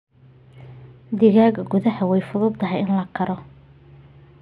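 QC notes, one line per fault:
No fault found, so the QC notes have nothing to list.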